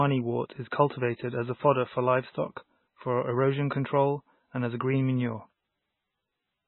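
Throughout the speech, the top end stops dead at 4 kHz, and the remaining band sounds watery and swirly, with metallic chirps on s sounds and smeared onsets. This is likely heavy MP3 compression at a very low bitrate, one consistent with roughly 16 kbps.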